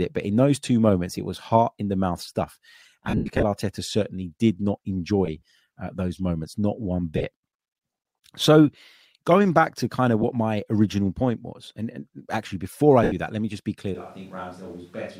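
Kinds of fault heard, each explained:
lost LE Audio frames: Short stretches of the speech turn into a grainy, noisy smear instead of going silent, because the decoder keeps replaying the last spectrum with scrambled phase. The worst hit runs from 3.05 to 3.43 s, scattered with runs up to roughly a tenth of a second. Briefer ones follow at 5.25 s after "certainly did not", 7.18 to 7.24 s, 10.22 to 10.24 s, and 13.03 to 13.12 s after "and actually before I". The smear, not a click or clean gap, separates it from a plain dropout.
switch to a distant microphone: From 13.95 s to the end the sound abruptly becomes roomy and hollow, with thinner bass, a level about 5 dB lower and background noise rising to about 25 dB below the speech. A far-off pickup taking over from the close one is the likely cause. A simple gain drop would keep the tone and room sound unchanged, but here the whole character shifts at a single instant.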